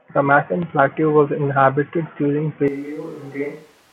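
At 2.68 s the speech abruptly turns hollow and roomy, losing bass and dropping by about 10 dB, with more room noise beneath it, about 25 dB below the speech, until the end. This is likely a switch to a distant microphone after the close microphone's signal dropped out.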